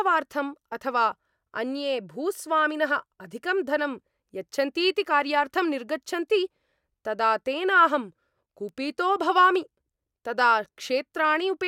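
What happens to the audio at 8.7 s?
At 8.69 s a single bit error spike cuts through the speech. It lasts one sample. One bit in the digital data flipped, so that sample's value jumped by a power of two and then snapped straight back. The jump reaches about -27 dBFS. Because the change is so abrupt, its energy spreads across the whole spectrum. It is heard as one sharp, dry tick. The tick has no relation to the speech around it.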